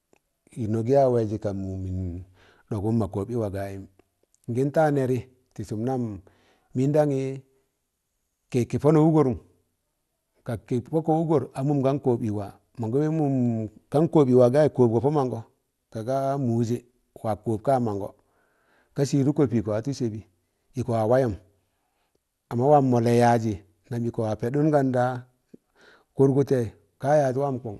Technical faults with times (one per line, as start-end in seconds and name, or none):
0.00-27.79 MP2 compression